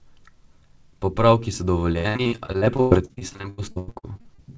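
From 1.92 s to 4.40 s the speech suffers repeated packet loss, which gives it a robotic sound. Gaps come one after another, the longest 105 ms. Each is patched by repeating the last sound. Nearly half the stretch is filled this way, so it turns choppy.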